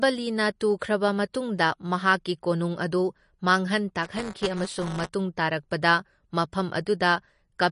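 Low-bitrate MP3 encoding is the likely cause of damage heard across the whole clip. The encoder, short of bits, has cut everything above 10.6 kHz and dropped weak frequency detail frame by frame, so the speech sounds dull, watery and swirly, with smeared attacks, plainly audible throughout.

From 4.03 to 5.09 s, just before "ꯇꯥꯔꯛꯄꯗ ꯃꯐꯝ", buffer tearing occurs. The writing program and the playback hardware have slipped so they cross inside each buffer. A small slice of every buffer repeats audio from about ten milliseconds earlier, with hard joins. The result is a robotic buzz at 188 Hz, which fits a 256-sample buffer.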